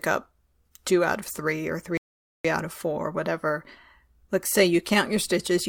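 Right after "out of three or", at 1.97 s, there's a rebuffering stall: playback runs dry, drops to silence for about 0.47 s, then picks up at 2.45 s with "out of four whatever" exactly where it left off. Nothing's missing, the speech just waits for data.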